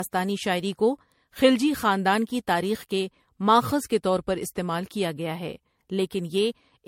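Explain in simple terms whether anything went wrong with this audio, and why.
Something did go wrong, and it lasts through the whole speech clip: generation loss. The sound is swirly and hollow, with the starts of sounds blurred, and nothing is left above about 16.5 kHz. It was likely squeezed into MP3 and unpacked again about five times. Each round added fresh damage on a slightly shifted grid. That stacking makes it sound worse than a single pass of compression would.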